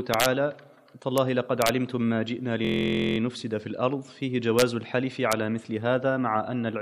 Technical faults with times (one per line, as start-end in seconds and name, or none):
0.14-0.26 integer overflow
1.18 integer overflow
1.62-1.69 integer overflow
2.65-3.18 system hang loop
4.59-4.62 integer overflow
5.32 integer overflow